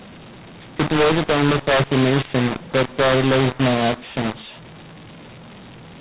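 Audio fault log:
throughout: mu-law and A-law mixed up. The speech was coded as G.711 mu-law but read back as A-law, so each 8-bit code lands at the wrong level. Loud and soft parts are misscaled and near-silent samples are lifted, making harsh distortion and noisy pauses.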